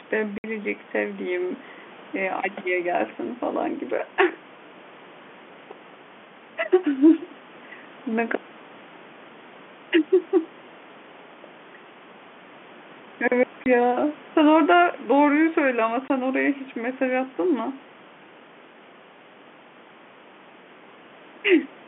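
Packet loss filled with silence cuts this telephone-band speech at 0.38–0.44 s, 13.64–13.66 s and 16.08–16.10 s, with hard-edged gaps of 60 ms and 20 ms that point to lost 20 ms packets replaced by silence.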